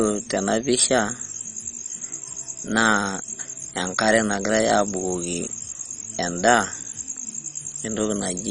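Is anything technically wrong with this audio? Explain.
Yes. Throughout the speech, the likely cause is MP2 compression at a very low bitrate, which fits about 32 kbps. Too few bits force the upper sub-bands off, leaving nothing above 10.3 kHz, and the remaining bands are coarsely quantised, so the sound is dull with heavy gurgling, granular distortion.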